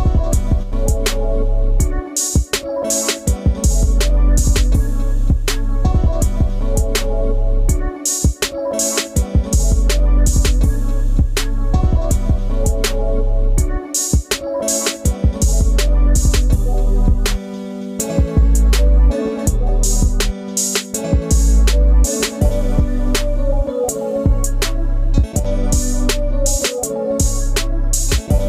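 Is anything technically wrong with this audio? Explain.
Yes. One channel drops out at 0.63 to 0.73 s and 25.39 to 25.45 s. The sound abruptly dips by about 6 dB, likely because one stereo channel briefly vanishes before the mono sum.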